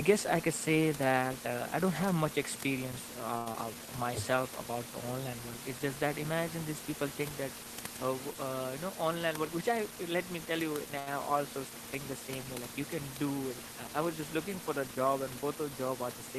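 Speech recording with a cluster of network playback glitches, all over a bed of room noise sitting about 10 dB below the talker. Right after "don't have much experience" there's a short stall from a late packet at 3.37 to 3.49 s: the jitter buffer ran dry, so the receiver held the last sound for 85 ms until the packet showed up, then picked up where it left off. You hear a stretched hold with a slight buzz or dip, with nothing lost. The same thing happens again at 10.99 to 11.09 s, a 72 ms hold. Just after the first stall, at 3.52 to 3.57 s, there's a short concealed packet loss: 60 ms of audio never arrived, and the receiver patched it by extending the last sound before blending back. It comes across as a quick smear, and the delay drops by roughly 40 ms. Then a jitter buffer slow-down runs from 3.70 to 3.87 s, where repeated pitch periods add 48 ms and play that stretch at 76% speed, drawn out but at the same pitch. 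Later, between "uh you know" and "let me tell you", a jitter buffer speed-up from 9.06 to 9.97 s trims roughly 100 ms by dropping pitch periods, so the talker sounds about 10% rushed.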